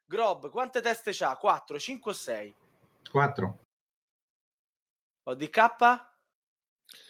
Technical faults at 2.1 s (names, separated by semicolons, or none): automatic gain rising